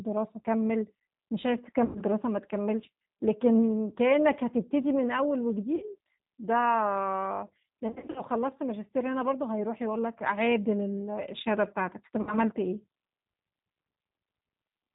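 Throughout, the speech has a slightly rough, synthetic edge and sounds muffled, with nothing above 4 kHz. That is the G.729 codec at 8 kbit/s, clearly audible here. It rebuilds each 10 ms frame from a vocal tract filter, a pitch predictor and a handful of pulses rather than the original waveform, and its damage is plainly audible.

At 1.85 to 2.02 s the sound is stretched into a buzzy tone or coloured noise that fades, and the voice stays weak or distorted before recovering. This is VoIP packet loss concealed by the speech codec. About 100 ms of audio went missing, and the decoder kept extrapolating its last pitch and filter while lowering the gain. The same happens more briefly at 5.76 to 5.84 s, with about 60 ms lost. From 7.88 to 8.22 s there is a stretch where 200 ms of losses are scattered over 280 ms and the longest gap is 60 ms. The last occurs at 12.21 to 12.35 s, again with about 60 ms lost.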